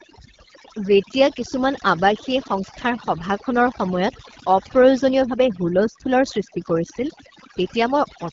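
From start to finish, overdone noise removal has been applied. Bands near the estimated noise are cut away, leaving near-silent gaps with twinkling specks.

The AMR wideband (HD Voice) codec also runs throughout. Nothing sounds above 7.4 kHz. The rough, raspy texture fits its 8.85 kbit/s mode, one of its lowest.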